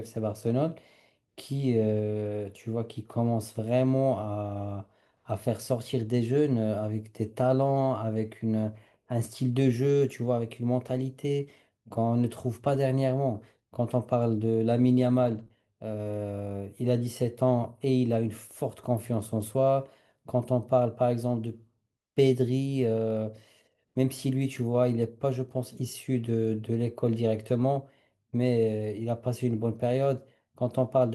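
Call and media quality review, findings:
Lost packet rebuilt from error correction, 12.73–12.75 s. Speech briefly rough and grainy, no gap. About 20 ms rebuilt, consistent with one lost packet. Opus in-band FEC: the next packet's low-bitrate copy was decoded in its place.

Lost packet rebuilt from error correction, 15.23–15.41 s. Longer stretch of coarse, noisy speech, about 100 ms. Points to several separate losses. Each hole is covered by a low-bitrate redundant copy, so the audio continues but with less detail.

Short concealed packet loss, 15.43–15.48 s. Brief smear right after the FEC stretch. Decoder PLC extended the preceding sound, about 27 ms filled for 20 ms missing, then cross-faded back into the real audio. The frame arrived too late, or not at all.

Short concealed packet loss, 15.48–15.51 s. Back-to-back with the previous one. Short wobble, about 13 ms filled for 20 ms missing. 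Same jitter-buffer or PLC path. Together with the two above, this points to a burst of network loss around 15.2–15.5 s.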